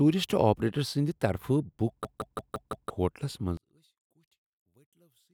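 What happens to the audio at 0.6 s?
At 0.6 s the speech carries on cleanly, with no dropout, click, distortion or other fault at that point.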